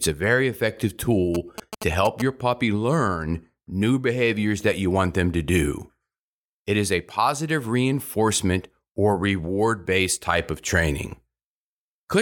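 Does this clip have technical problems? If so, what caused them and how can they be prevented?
Yes. GSM signalling bursts run from 1.35 to 2.22 s as a galloping dit-dit-dit of short buzzes at about 217 Hz, roughly 10 dB below the speech. A nearby 2G phone was exchanging short radio bursts with its network. Some part of the audio circuit rectified that RF into audible pulses at the burst repetition rate. Keeping phones switched off or in flight mode and well away from microphones, cables and preamps prevents this.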